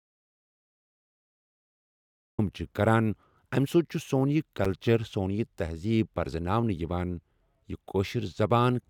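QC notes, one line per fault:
0.00–2.39 s, audio dropout to silence: The input was already lost when the clip begins, most likely through a disconnected source, a broken link or an accidental mute, while the recorder kept writing silence. The result is dead silence with no room tone at all, and the speech enters abruptly mid-flow at 2.39 s on "چھِ کَران اَمہِ سۭتۍ". Whatever was spoken before that point is unrecoverable.
4.65 s, gap between stream segments: Two consecutive stream segments, consistent with roughly 6-second segment lengths, were joined with timestamps that do not quite meet, leaving a hole of about 8 ms that the player filled with silence. It is heard as a brief, hard-edged tick or blip of nothing cutting into the speech. The surrounding audio is intact, so nothing is missing, only pushed slightly later.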